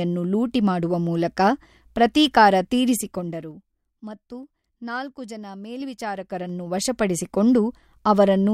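From 2.96 to 3.8 s, after "ಲೂಟಿ ಮಾಡುವ ಮೂಲಕ ಪ್ರತೀಕಾರ", zipper noise appears. The speech drops about 15 dB in unsmoothed 2 dB steps, around ten per second. Each step clicks. From 5.72 to 7.16 s, a rise of about 15 dB ticks more slowly, around five steps per second.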